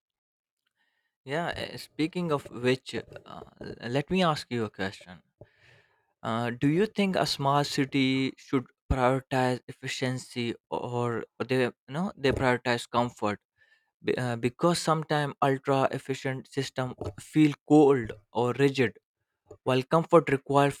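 No audible technical faults.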